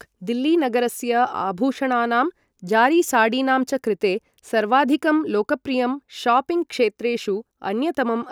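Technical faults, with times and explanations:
Nothing stood out on listening to the speech in this recording.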